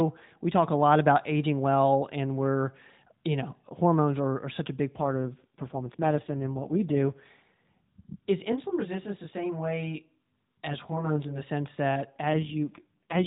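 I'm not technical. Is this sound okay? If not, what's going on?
No. Twice the mobile link drops to a much lower data rate, an AMR rate drop. This happens from 5.0 to 7.27 s, right after "are such a big", and again from 12.3 s to the end, after "sense that". With fewer bits for the voice, it turns rougher and more robotic, though it keeps the same narrow phone-call tone.

From 8.52 to 11.42 s, ending just before "sense that", there is channel delay (comb filtering). One of two copies of the sound arrives roughly 20 milliseconds late and the two get blended together. Parts of the sound cancel at evenly spaced pitches, so it turns rough or slightly doubled.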